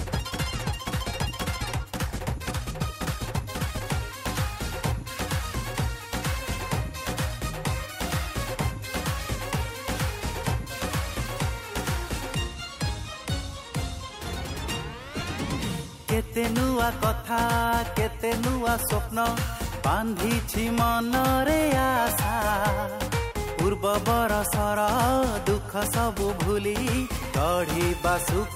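From the start to 3.86 s the audio runs at about 1.75 times normal pace with unchanged pitch, sounding choppy and rushed: a time-stretched section, likely from software dropping short pieces to shorten it. A spectrogram shows compressed events and seam-like discontinuities, then normal spacing afterwards.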